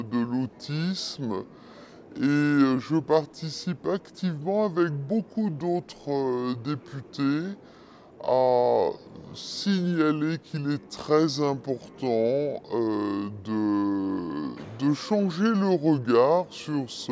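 Throughout, a wrong sample rate plays the samples back too slowly, consistent with 24 kHz material played at 16 kHz, so everything runs at 0.667 speed and about seven semitones lower.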